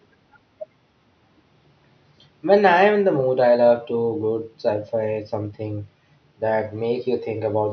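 No technical faults can be heard anywhere here.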